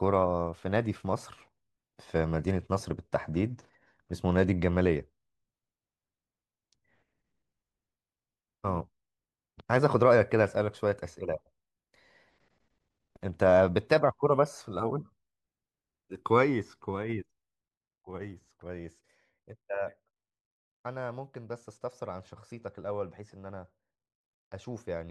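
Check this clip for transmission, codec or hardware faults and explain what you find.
There's one fault, a stretch of zipper noise between 17.56 and 18.48 s. There the level drops by roughly 10 dB, but it's done in hard 1 dB jumps, about ten a second, with no smoothing between them. Each jump is a tiny discontinuity in the waveform, so you get a little click per step, and together they make a fast ticking rasp riding on the speech while the level falls.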